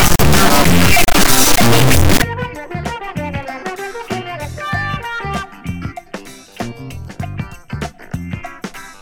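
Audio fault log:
0.00–2.22 s, integer read as float: the sound points to 32-bit integer samples being read as 32-bit float, so output jumps between zero and the clipping limit as an extremely loud, buzzing square wave.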